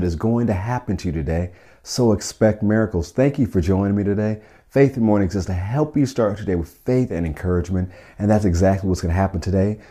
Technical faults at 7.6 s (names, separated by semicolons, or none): none